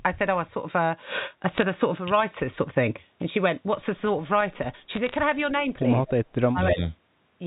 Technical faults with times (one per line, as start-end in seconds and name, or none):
1.56-1.63 bit errors on a digital phone line
4.95-5.14 bit errors on a digital phone line
6.06-6.13 speech suppressed in double talk
6.40-6.81 speech suppressed in double talk